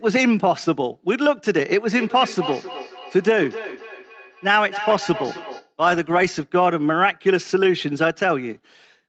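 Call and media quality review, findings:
Feedback echo between two devices, 1.9 to 5.74 s: second device in the room replays the far end into a live mic, outside its echo canceller's reach. Speech returns roughly every 300 ms, thinner and ringing, peaking about 12 dB below the talker.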